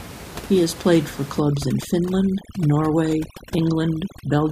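Overdone noise removal runs from 1.4 s, just after "has played for", to the end: bands near the noise floor get cut, leaving the background broken into twinkling specks.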